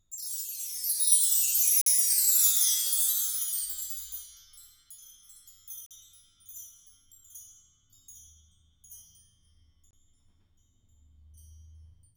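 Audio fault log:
1.81–1.86 s, 5.86–5.91 s, 9.91–9.93 s: gap between stream segments. Three hard-edged dropouts of about 50, 45 and 23 ms recur at 4-second spacing, each where one segment's time stamps stop short of the next and the player pads the difference with silence. Nothing is lost; the sound simply pauses and resumes. On the waveform each appears as a flat line with abrupt edges, and on the spectrogram as a narrow empty vertical stripe across all frequencies.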